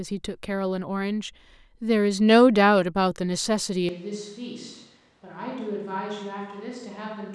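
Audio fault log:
3.89 s to the end, switch to a distant microphone: the speech turns abruptly roomy and hollow, with thinner bass, a level about 10 dB lower and room noise around 30 dB below the speech. The close microphone likely dropped out, leaving a farther pickup.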